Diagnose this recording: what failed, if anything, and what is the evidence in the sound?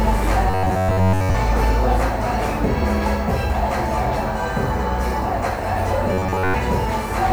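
The audio buffer most likely ran dry: new samples arrived too seldom, so a short block was replayed to fill the gap. This is robotic sound from repeated short buffers, heard from 0.50 to 1.35 s and again from 6.13 to 6.55 s. Each stretch carries a rigid, metallic buzz near 94 Hz, which fits a repeated block of about 10.7 ms. Most of the sound in those spans is repetition, with the skipped material lost.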